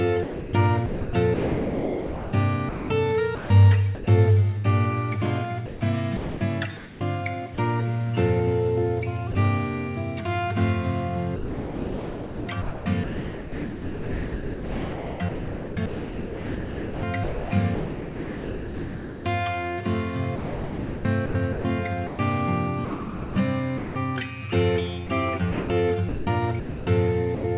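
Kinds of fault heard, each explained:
Sound chopped by the voice detector: in five separate stretches between 0.23 and 27.44 s the sound repeatedly flickers into synthetic comfort noise, likely from the sender's detector switching on and off.
Sound dropped by the voice detector: one brief 30 ms gap at 9.32 to 9.35 s gives way to steady comfort noise, likely a single detector cut rather than repeated flicker.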